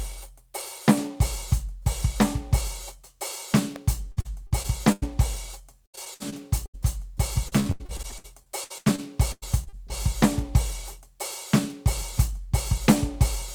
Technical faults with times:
3.76 electrical switching spike
4.11-5.04 repeated packet loss (robotic sound)
5.86-6.86 repeated packet loss (robotic sound)
7.48-9.92 repeated packet loss (robotic sound)

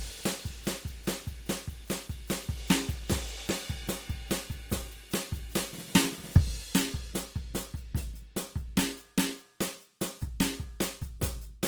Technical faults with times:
0.00-11.68 Opus compression

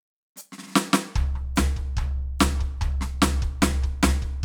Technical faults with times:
none

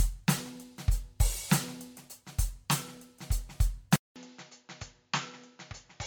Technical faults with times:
0.00-6.06 generation loss
3.96-6.06 input switched to a poorer device

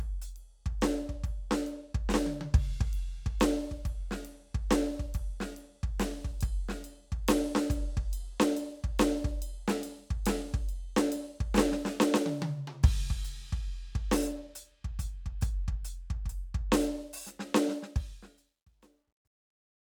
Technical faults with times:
17.74-19.82 truncation distortion on a fade

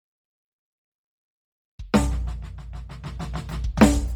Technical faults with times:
0.00-4.16 Bluetooth LC3 compression

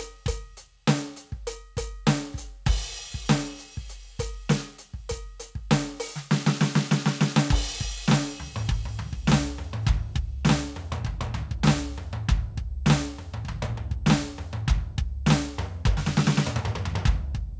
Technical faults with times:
none

